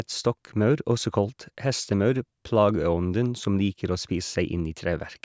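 No technical faults can be heard anywhere in this speech recording: the signal stays continuous and steady throughout, with nothing in it pointing to a problem in the recording or transmission chain.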